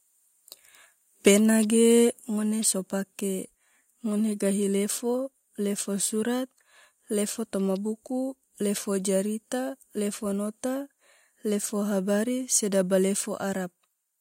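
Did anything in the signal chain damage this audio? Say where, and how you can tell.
Yes. Microphone overload at 1.26 to 1.31 s: the loudest stretch of speech takes on a harsh, crackling edge, with the peaks flattened where the signal runs about 4 dB past full scale and about 7% of samples in that window sit pinned at the limit. This points to the converter stage: the input was likely set too hot, so the analogue-to-digital converter ran out of headroom and squared off the waveform tops.

Microphone volume stepped down at 1.28 s and again at 2.28 s: the whole signal, speech and background together, drops abruptly in level, by about 2 dB the first time and about 5 dB the second. The first step lands inside the clipped burst, which fits call processing reacting to the overload. The likely mechanism is an automatic gain control cutting the device's input volume in discrete jumps rather than a smooth fade.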